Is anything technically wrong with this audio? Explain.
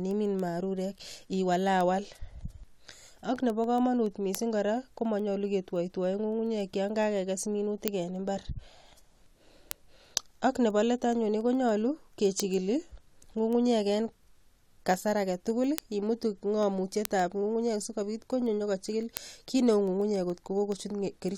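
Yes. Word clock ticks run through the whole speech clip, from 0.11 s to 21.29 s. Sharp ticks repeat at a steady rate, roughly one every 0.15 s, well over a hundred in all. Their strength varies. A digital link is being read by a device on its own clock, not locked to the sender. The clocks differ by roughly 150 ppm. Each time they slip past each other, a single sample is likely dropped or repeated.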